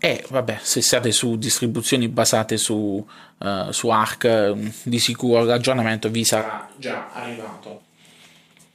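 At 6.43 s the speech suddenly turns roomy and hollow, losing bass. The level falls by roughly 10 dB and background noise rises. At 7.78 s the close sound returns abruptly. This is likely a switch to a distant microphone.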